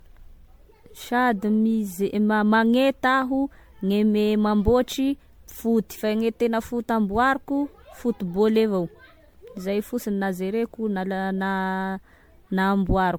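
Throughout the speech, the sound is swirly, smeared and hollow, and attacks blur. This is generation loss, likely from about seven rounds of MP3 encoding at 96 kbit/s. Each pass requantised on a shifted grid, stacking noise and spectral holes.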